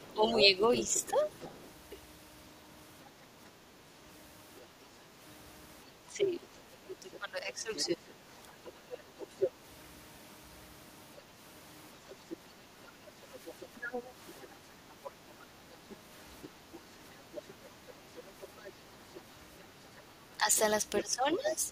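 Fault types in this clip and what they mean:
Other side's voice leaking through: A second voice is audible under the talker at 0 to 1.68 s, 7.12 to 9.49 s, 12.1 to 12.36 s and from 13.46 s to the end. It is roughly 5 to 15 dB down, loudest around 8 s. This is likely far-end loudspeaker playback the echo canceller didn't fully remove.
Speech suppressed in double talk: The talker's level sinks while that second voice is present, around 10 dB at 0.09 to 1.18 s and 20.37 to 21.5 s, and deeper, around 15 dB, at 6.07 to 8.05 s. This likely comes from the canceller ducking everything when both sides overlap.
Background gated by the echo canceller: At 12.66 to 13.03 s the room sound briefly dips by about 6 dB for roughly 150 ms, then comes back. The canceller clamped the microphone down while the loudspeaker was active and released it shortly after.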